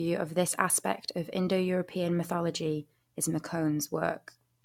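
Throughout, the speech sounds swirly and hollow, with blurred attacks: generation loss, likely from about three AAC-LC re-encodes, each requantising on a shifted frame grid.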